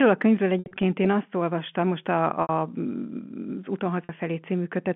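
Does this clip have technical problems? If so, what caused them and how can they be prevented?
Yes. Packet loss with pitch repetition occurs at 0.59–0.83 s, between "a könyvről" and "én azt olvastam most", where about 140 ms went missing in gaps (longest 70 ms). It recurs at 2.42–2.49 s (70 ms) and 4.04–4.09 s (50 ms). Each gap was filled by looping the last pitch cycle and fading it. The result sounds held and buzzy. A waveform shows identical repeating cycles shrinking in size, and a spectrogram shows frozen, flat harmonic lines fading out. The G.711 telephone band stays intact around these gaps. To prevent it, use a deeper jitter buffer, add forward error correction, or carry the audio on a less congested network path.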